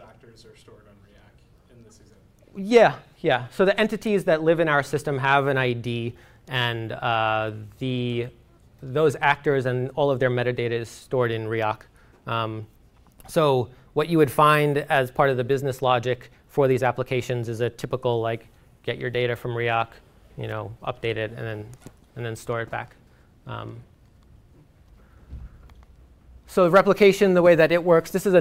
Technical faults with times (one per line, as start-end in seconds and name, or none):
none